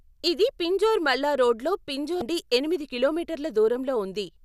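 A stretch of damaged data in the compressed stream of this speech recording makes the decoder misread the affected frames and lose sync while it hunts for the next valid frame header, leaving a brief glitchy blip from 2.19 to 2.22 s.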